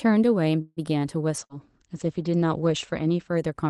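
At 0.61 s the sound stalls until 0.80 s in a call audio freeze. The last sound is stretched as a fading buzz or hiss for about 150 ms, with a brief silence of about 20 ms, then resumes exactly where it stopped. Nothing is skipped, which separates it from packet loss. The likely cause is a jitter buffer running empty while packets were delayed.

From 1.43 s to the end, a call bitrate drop takes the Opus stream from 32 to 15 kbps. The top end falls from about 12 kHz to 8 kHz, so the sound turns muffled and rough. It stays at the lowest rate for about 1.5 s. This is a change partway through, not the steady character of the call codec.

Right after it begins, a burst of packet loss hits from 1.44 to 1.53 s. About 55 ms of fading concealment fills the gap, and the audio then jumps ahead, with roughly 60 ms gone. Unlike the earlier freeze, part of the sound is actually missing.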